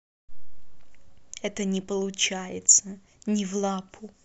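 Nothing goes wrong anywhere in this speech recording, so there's no fault to point to at any moment.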